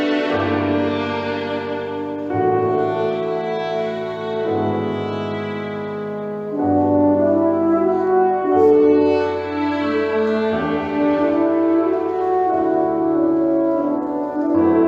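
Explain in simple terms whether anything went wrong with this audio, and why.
Nothing went wrong with this audio that a listener would notice. There is no moment anywhere in it where something happens that shouldn't, so there is nothing to point to.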